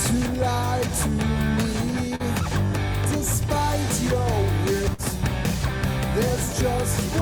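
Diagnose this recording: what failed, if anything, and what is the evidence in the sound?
Short concealed packet loss at 2.15–2.21 s, network stage: about 40 ms never arrived in time, so the receiver extended the preceding sound, leaving a brief smear.

Burst of packet loss at 4.93–5.00 s, network stage: 40 ms went missing, bridged by 48 ms of continued, fading sound before the audio resumed further on.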